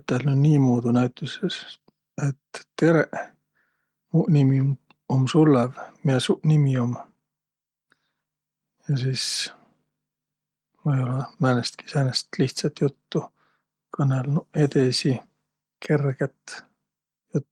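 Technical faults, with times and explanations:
No technical faults turn up in this speech. The Opus voice compression keeps the full audio band, and its light coding traces fit a hybrid setting at around 24 kbps.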